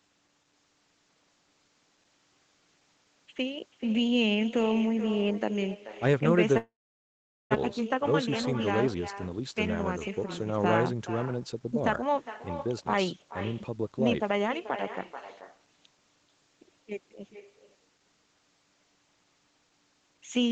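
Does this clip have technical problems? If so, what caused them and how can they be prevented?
Yes, three kinds of problem stand out.

Echo with no canceller runs through the whole clip. Every phrase comes back roughly 0.4 s later as a thinner copy, about 13 dB below the direct sound. The far end is playing the call on a loudspeaker, its microphone picks that up, and nothing strips it out, so it returns after the network round trip. Having the far end use headphones, or making sure its echo cancellation is actually running, would stop this.

A long network dropout hits from 6.57 to 7.57 s. The sound trails off into a brief fading buzz or hiss and then goes silent for most of that second, and about 600 ms of the signal never comes back. When audio resumes, it picks up further along. That points to packets likely being held up or lost in transit, leaving the receiver nothing to play and a few hundred milliseconds of extra delay afterwards. 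A steadier connection, such as wired instead of congested Wi-Fi, is the real fix.

Jitter buffer speed-up follows right after, from 7.79 to 9.41 s at about 110% speed and again from 10.09 to 12.17 s at about 107%. Pitch stays put, but the delivery sounds hurried. After the stall, the buffer had too much audio queued, so the receiver trimmed short pitch-period slices to cut roughly 150 ms in each stretch. Avoiding the burst of late packets in the first place prevents this.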